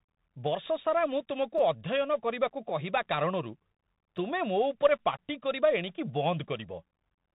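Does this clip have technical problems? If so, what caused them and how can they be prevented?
Yes. A Bluetooth CVSD headset codec runs through the whole speech clip: nothing above about 3.8 kHz survives, s sounds turn scratchy, and a granular hiss sits under everything. That hiss and overload grit set it apart from a plain low-pass filter. Switching the headset to wideband mSBC or using a wired microphone prevents it.

A repeated buffer occurs at 1.58 s, just after "ମୁଁ ତୁମକୁ", where one tiny slice plays three extra times, and again at 4.18 s with one extra play. The slice length points to a buffer of about 5 ms. Because it is so short, each event sounds like a brief buzz or click rather than a stutter. Unlike a dropout, there is no silent gap, since the audio repeats instead of vanishing. A larger audio buffer or higher priority for the audio thread prevents it.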